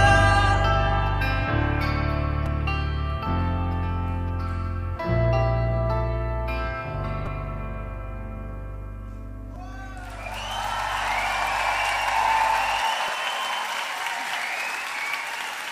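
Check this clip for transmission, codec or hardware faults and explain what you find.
Four short playback glitches are audible. Repeated buffer at 2.46, 7.26, 9.55 and 13.08 s: new audio arrived late, so the same roughly 5 ms slice replays twice or three times, giving brief clicks.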